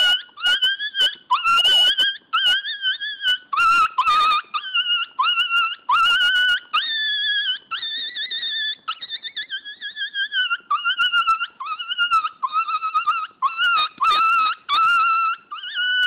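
Nothing here sounds wrong to the ear: the audio runs along steadily with no glitches, gaps or odd disturbances anywhere in it.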